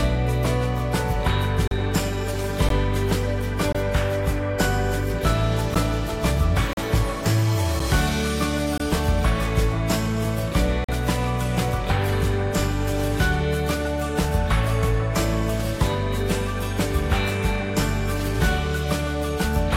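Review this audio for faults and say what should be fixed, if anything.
Short hard-edged silences cut the sound at 1.68–1.71, 2.69, 3.73–3.75, 5.75, 6.73–6.77, 7.79, 8.78–8.80 and 10.84–10.89 s. This is a gap between stream segments: on a one-second segment grid, mismatched timestamps leave 8 to 43 ms holes that the player fills with silence. No audio is lost. To prevent this, make segment timestamps contiguous so that each segment starts exactly where the previous one ends.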